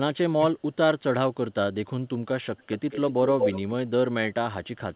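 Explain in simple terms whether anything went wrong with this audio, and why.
A couple of things went wrong. Around 0.37 to 0.44 s the speech briefly ducks way down for about 70 ms. That's speech suppressed in double talk, likely because the echo canceller heard both sides at once and turned everything down.

Later there's an echo leak: a copy of the voice trails it by 217 ms, faint from 2.57 to 3.13 s, then about as loud as the speech itself from 3.39 to 3.71 s. The likely cause is a speakerphone whose echo canceller let some of its own playback back through.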